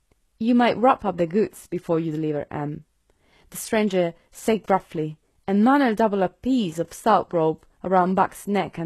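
Throughout the speech, the sound is likely HE-AAC compression at a low rate, which fits a bitrate of about 16 kbps. Treble is rebuilt from copied lower bands, so s sounds turn gritty and metallic. A spectrogram shows smeared, repeated high-band texture, with nothing above 12.3 kHz.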